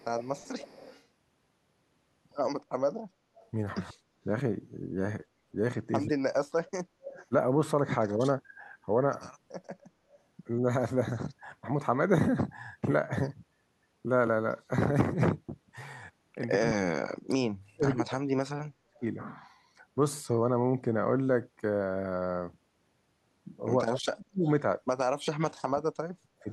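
Echo leak from 0.0 to 1.05 s: a delayed copy of the speech trails it by 141 ms, about 20 dB down. This is likely loudspeaker sound that the far end's echo canceller failed to remove. The echo returns faintly from 3.4 to 3.5 s.

Speech suppressed in double talk from 3.9 to 7.33 s: the speech cuts out in pieces, dropping by as much as about 40 dB over roughly half a second in total. This is likely the canceller turning down both talkers while they overlap.

Echo leak again from 6.66 to 7.26 s, louder this time at about 15 dB below the speech.

Background gated by the echo canceller from 6.92 to 7.01 s: the canceller clamps the microphone while the loudspeaker plays, so the room sound dips by about 19 dB for a moment, then returns.

Speech suppressed in double talk recurs from 16.52 to 19.02 s, with about 1.5 s of dropouts, and from 23.83 to 26.49 s, with about 2 s of dropouts. Within that last stretch, a very faint echo leak appears from 24.44 to 24.5 s.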